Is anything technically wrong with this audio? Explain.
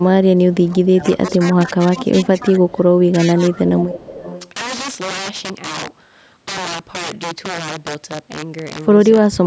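Yes. Integer overflow runs through the whole clip: loud peaks, driven about 14 dB past the limit, wrap to the opposite sign instead of being held, producing violent cracks sharper than clipping.

Speech suppressed in double talk, likely from an echo canceller that could not separate the talker from loudspeaker echo while both sides spoke, turns the speech down from 0.0 to 2.95 s, from 3.12 to 3.85 s, and from 9.27 s to the end. The first two stretches dip by up to about 15 dB, the last by about 25 dB, so the speech fades or drops out in pieces.

Echo leak, likely where the far side's canceller let through part of its microphone pickup, sends back a delayed copy of the speech. Brief scraps at 1.27, 2.7 and 3.07 s arrive 303 ms late, about 20 to 30 dB down, and a longer stretch from 3.89 to 4.51 s trails by 463 ms at about 20 dB down.

The call's microphone processing leaves nothing above 8 kHz, which is expected there.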